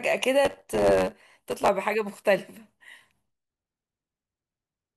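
From about 0.44 s to 1.69 s the speech picks up a steady buzz around 92 Hz and rushes along roughly 1.07 times faster, while the timbre stays the same. That's a block size mismatch (truncated): one stage hands over blocks, which fits 512 samples each, and the next stage reads fewer, so the tail of every block gets dropped. Each cut lands at the block rate, which is the buzz.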